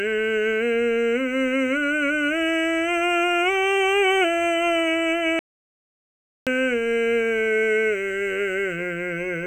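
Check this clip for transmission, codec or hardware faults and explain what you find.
There's one fault in this music clip: an audio dropout to silence from 5.39 to 6.47 s. The input was likely lost briefly, through a disconnect or mute, while recording carried on writing silence, so about 1.08 s of music vanishes into dead, tone-free silence before resuming mid-flow.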